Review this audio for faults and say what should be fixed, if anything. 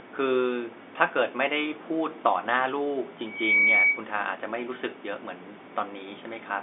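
Loudspeaker feedback squeal, 3.26 to 4.06 s: the microphone hears its own loudspeaker, and loop gain exceeds one at 2.3 kHz. Over roughly a third of a second it swells to about 10 dB above the speech. A spectrogram shows one bright horizontal line, and the waveform envelope balloons.

To prevent it, lower the loudspeaker gain, keep the microphone out of the loudspeaker's path, or notch out 2.3 kHz.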